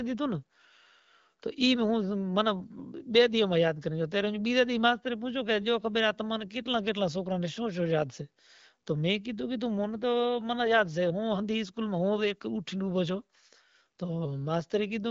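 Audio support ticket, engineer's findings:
No faults found in clip.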